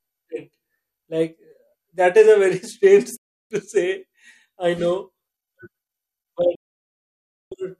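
At 3.17 s the speech mutes with a roughly 3 ms fade, a digital broadcast dropout lasting 0.34 s before returning on "to say I know". A second, 0.96 s dropout runs from 6.55 to 7.52 s. Corrupted or missing frames made the receiver mute, permanently losing that audio.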